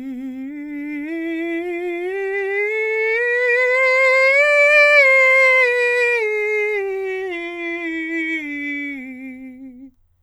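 Nothing in this music clip stands out as a technical fault; it just runs along without any trouble.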